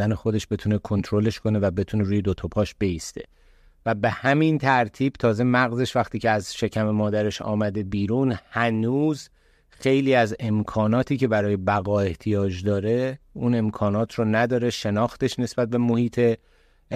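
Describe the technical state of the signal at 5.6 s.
At 5.6 s the speech signal is intact, with no audible technical fault at that moment.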